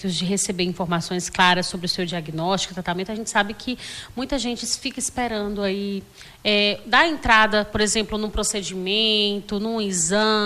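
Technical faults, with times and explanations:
No technical faults can be heard, so there are no times or explanations to give.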